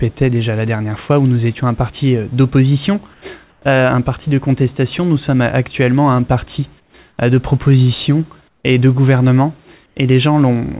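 Brief gaps at 3.14, 3.50, 6.80, 7.10, 8.48 and 9.86 s (80 to 160 ms) go flat, featureless and about 2 to 10 dB quieter: likely comfort noise in place of the background.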